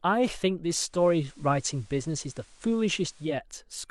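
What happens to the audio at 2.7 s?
The speech is in the middle of a digital radio blend to analogue, lasting from 0.84 to 3.39 s. The receiver lost its digital stream and cross-faded over 190 ms to the FM broadcast, so the level shifts by about 2 dB, and a faint hiss sits well below the speech.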